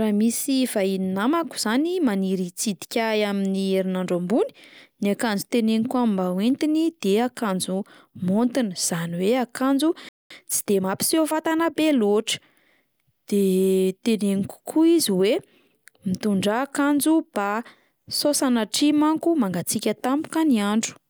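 A speech clip with a playback stall and a time-compressed catch-up. At 10.09 s the speech cuts out mid-flow. The output goes silent for about 217 ms, until 10.30 s. The likely cause is the player running dry of buffered data, or its output thread being blocked briefly. Once sound returns, the speech carries on from where it broke off. From 10.30 s to 11.74 s the speech then runs hurried, at about 1.15 times normal speed. The pitch stays where it was. This is time-compressed catch-up. The player is clearing the backlog left by the stall. It drops small slices of audio and cross-fades across each join. That keeps the pitch steady but leaves the rhythm rushed.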